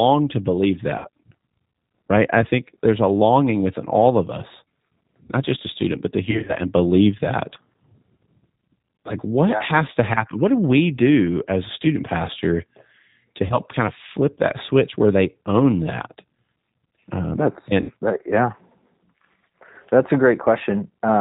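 G.729 coding runs through the whole clip. It is plainly audible as a narrow, slightly rough and synthetic quality, consistent with G.729A at 8 kbit/s. The decoder rebuilds the speech from a vocal tract filter, a pitch predictor and a few pulses per 10 ms frame, so nothing above 4 kHz survives. The fine texture of the voice is replaced by a modelled approximation.

VoIP packet loss concealed by the speech codec strikes at 0.98–1.07 s, 6.31–6.55 s, 13.46–13.56 s and 17.82–17.93 s. At each gap the decoder stretches its last pitch and filter forward with falling gain, so the speech smears into a buzzy tone or coloured noise that fades. The first gap is about 60 ms, the third about 40 ms and the last about 70 ms. At 6.31 s, about 120 ms of losses are scattered over 180 ms, with breaks of up to 40 ms. The speech stays weak briefly after each gap.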